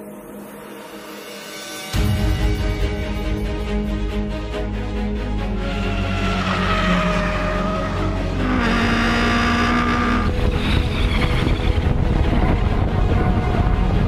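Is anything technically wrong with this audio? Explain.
No, nothing technically wrong turns up anywhere in the recording.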